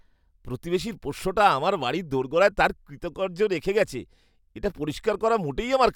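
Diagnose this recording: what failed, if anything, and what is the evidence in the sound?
Nothing in this speech recording points to a failure at any stage; there's no audible evidence of a problem to trace.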